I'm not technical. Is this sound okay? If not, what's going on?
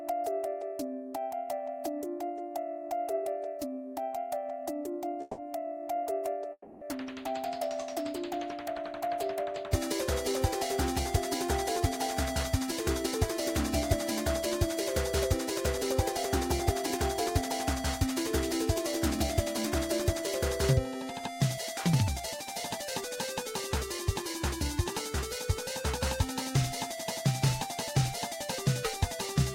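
No. There are two problems.

At 5.21 s and again at 6.52 s the sound briefly stalls. This is a call audio freeze. The last bit of sound is stretched into a short fading buzz. The second one ends in a brief silence. The likely cause is data arriving late. Nothing is lost, but the sound is pushed later.

From 11.8 s to 23.2 s there is a jitter buffer speed-up. To catch up on that delay, tiny slices are cut out. The sound plays about 4% faster, losing about half a second in total.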